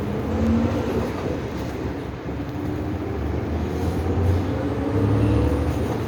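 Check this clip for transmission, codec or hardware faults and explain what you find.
No transmission, codec or hardware fault can be heard anywhere in the audio; the signal stays continuous and intact throughout.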